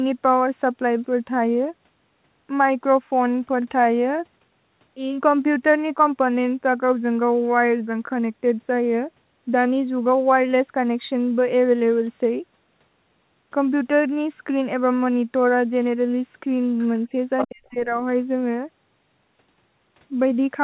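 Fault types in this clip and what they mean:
Other side's voice leaking through: At 16.79 s a very faint second voice shows up for about 50 ms, far below the talker's level. At 17.38 s a much stronger burst of about 90 ms arrives, nearly as loud as the main voice. This is likely loudspeaker echo that the echo canceller failed to remove. On a spectrogram both appear as short, separate harmonic smudges layered over the talker's own pattern, and the waveform shows a brief extra bump at 17.38 s.
Speech suppressed in double talk: From 17.45 s to 17.93 s, overlapping the end of the stronger leak, the talker's level collapses for about half a second, dropping by roughly 40 dB at its deepest. The voice dips. The likely cause is the echo canceller turning down everything while both sides overlapped. The waveform shows a hollow in the envelope, and the spectrogram goes nearly blank across the whole band, which tops out at 4 kHz throughout the clip.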